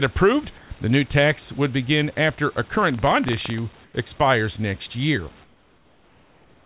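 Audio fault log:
2.77–3.59 s, buffer tearing: after "would begin after a", a robotic 23.4 Hz buzz. A small slice of each buffer replays audio about 150 ms old, which fits a 2048-sample buffer.
0.58–0.70, 3.84–3.94 and 5.44–6.66 s, comfort noise in place of the background: steady, featureless noise about 4, 4 and 8 dB quieter replaces room detail. This is likely discontinuous transmission filling pauses.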